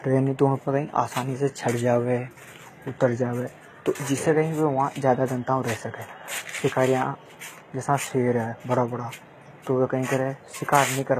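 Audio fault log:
throughout, HE-AAC compression: s sounds come out plainly gritty and lispy, likely because treble gets rebuilt from copied lower bands at around 20 kbps.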